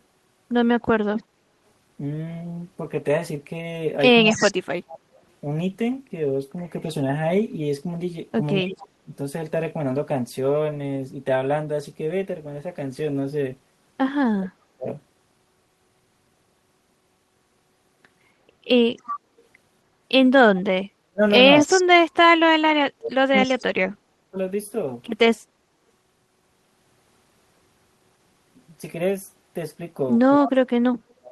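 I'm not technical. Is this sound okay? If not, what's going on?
No, there are two linked problems, both from the other end of the call and both likely caused by someone using a speakerphone whose echo canceller isn't keeping up.

First, echo leak: you can hear a delayed copy of the speech coming back about 0.27 seconds late. It's a faint scrap at 1.17 to 1.22 s and again at 30.46 to 30.51 s, clearly audible at 4.29 to 4.54 s, and it runs for a long, noticeable stretch from 18.97 to 23.65 s.

Second, speech suppressed in double talk: when both sides talk at once, the system gets confused and turns the talker down almost to silence. You'll hear the voice dip or cut out at 4.34 to 5.06 s, 8.61 to 9.08 s, 14.28 to 14.87 s, and 30.39 s to the end. It's worst from 20.92 to 24.37 s, where about two seconds of it goes missing in pieces.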